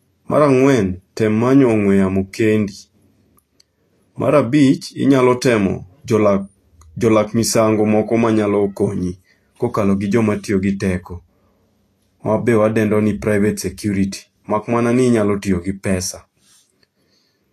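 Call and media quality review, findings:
Hissy, grainy treble throughout the speech. Attacks blurred, tones roughened. Likely Vorbis compression at a low setting, consistent with roughly 32 kbps. High band cut off early. Remaining treble coarsely quantised, its detail replaced by noise of similar energy.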